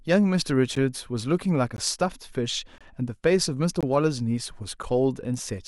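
A speech recording with a gap between stream segments: hard-edged silent holes of about 6 to 25 ms at 0.75, 1.76, 2.78–2.81, 3.81–3.83 and 4.83 s. Their one-second spacing points to segment timestamps leaving small gaps that the player pads with silence.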